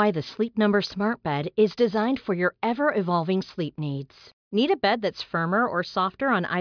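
No technical faults can be heard anywhere in the speech, so there is nothing to describe in time order.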